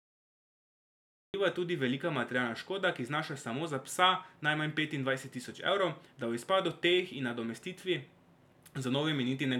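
A speech clip with a cut-off start: the first 1.34 s is flat digital silence, then the speech begins abruptly mid-sound with no attack or fade-in, because capture began late. The waveform shows a dead flat line jumping straight to the speech's amplitude at 1.34 s, and the spectrogram shows a blank region ending in a hard vertical edge.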